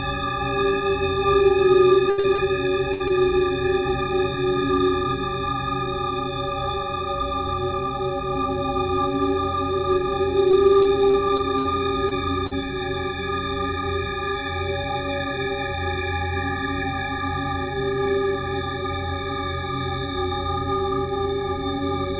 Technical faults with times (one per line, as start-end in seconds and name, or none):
2.10-3.11 repeated packet loss (robotic sound)
10.51-12.53 repeated packet loss (robotic sound)